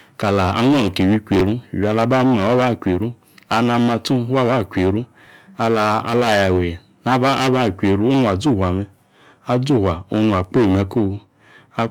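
At 1.36 to 1.41 s there's a quick garbled flick, and again at 5.24 to 5.27 s. Both are chunks out of order. A block of about 11.6 ms of speech turns up late and plays after the blocks that should follow it: three chunks late the first time, two the second. Nothing's missing, but the shuffle leaves hard joins, so you hear a tiny jumbled stutter.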